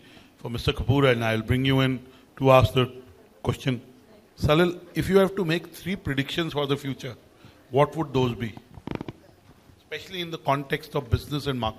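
No technical faults can be heard anywhere in the audio.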